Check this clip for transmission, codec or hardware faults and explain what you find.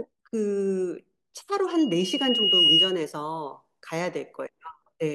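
There is one fault, loudspeaker feedback squeal, from 1.70 s to 2.99 s. A microphone was picking up a loudspeaker carrying its own signal, and around 2.9 kHz the gain around that loop rose above unity, so the tone fed on itself and kept growing. It swells over about a second into a piercing whistle that rises roughly 10 dB above the speech, then stops at 2.99 s.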